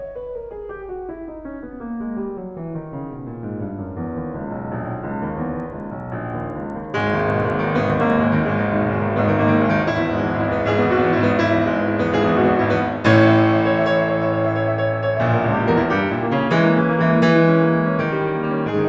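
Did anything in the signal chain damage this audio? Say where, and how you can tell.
Yes. From 5.6 to 8.2 s the music carries a steady ticking at 10 Hz, heard only under the signal. This points to a resampler restarted on every block at sample-rate conversion, which fits a 24 kHz to 16 kHz step. Each 100 ms block lacked its neighbours' samples, leaving an edge error.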